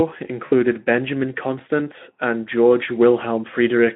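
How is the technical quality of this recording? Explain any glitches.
One glitch stands out, a short dropout near the start. From 0.45 to 0.53 s there is VoIP packet loss concealed by the speech codec. About 60 ms of packets went missing, which fits three lost 20 ms frames. The Speex decoder bridged the gap by repeating its last pitch and filter at falling gain, so the speech smears into a brief buzzy tone or coloured noise that fades and stays weak just after packets return. The narrow 200 to 3400 Hz telephone band of the line is audible throughout.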